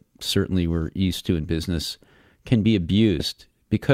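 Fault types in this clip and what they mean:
Compressed frames skipped: Whole blocks of the encoded speech never reach the output, so the audio leaps forward mid-phrase. Here it happens right after "in business can be", from 3.19 to 3.23 s. Roughly 70 ms of sound goes missing, which points to around seven dropped frames of 10 ms each.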